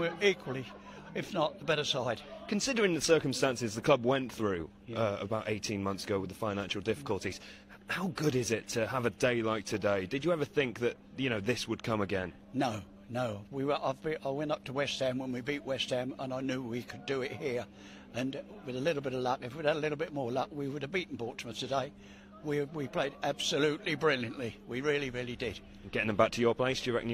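No technical faults are audible.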